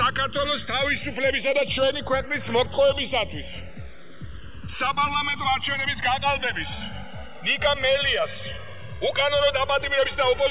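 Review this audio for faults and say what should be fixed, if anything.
Channels drifting apart runs through the whole clip. The two channels sit on clocks that disagree by a few hundred parts per million, so their offset grows to about 2 ms by the end. Summed to mono, this produces a slow flanging sweep. On a spectrogram, comb notches slide steadily downward in frequency, most visible below the 4 kHz ceiling set by the G.711 call path. Clocking both channels from one source, or resampling one to match the other, would prevent this.

A skip ahead occurs between 2.66 and 2.68 s. Roughly a second of audio is missing, and the two sides are butted together with no filler, so the sound jumps forward abruptly. The waveform shows a hard splice, and the spectrogram shows a sudden change in content with no silent gap. Sizing the jitter buffer so it does not overflow and discard queued audio would prevent this.

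A jitter buffer speed-up runs from 4.54 to 6.53 s. The receiver repeatedly trimmed short pitch-period pieces to drain excess delay, playing the audio about 8 percent fast at unchanged pitch and cutting roughly 150 ms in total. The section sounds hurried. On a waveform, whole cycles are dropped while harmonic spacing on the spectrogram stays put. Preventing the delay build-up that triggers this catch-up, or draining it more gradually, would fix it.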